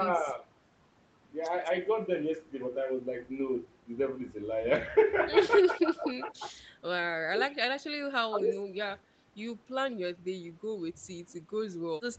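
From 0.19 to 0.43 s, 5.61 to 6.51 s and 8.29 to 8.53 s, the speech level sags. This is most likely speech suppressed in double talk: with both ends talking, the echo canceller could not tell the near talker from loudspeaker echo and attenuated both. The first dip is shallow, about 5 dB. The third reaches about 10 dB. The middle one is both the longest, roughly three quarters of a second, and the deepest, about 15 dB.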